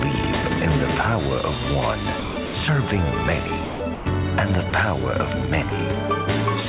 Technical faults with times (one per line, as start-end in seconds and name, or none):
2.20-2.54 sound dropped by the voice detector
3.64-4.06 sound dropped by the voice detector
4.70 sound dropped by the voice detector
5.70 sound dropped by the voice detector